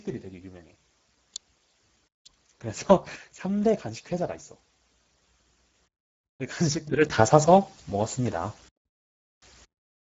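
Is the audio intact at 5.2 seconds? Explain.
No. Speex codec damage runs through the whole clip, including 5.2 s. With few bits left for the excitation, this CELP speech coder makes the speech noisy and hoarse, which fits a bitrate near 10 kbps. Nothing remains above 7.7 kHz.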